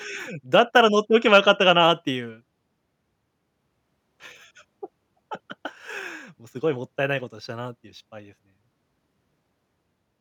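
Listening to this speech recording, nothing stood out as a technical problem at any point.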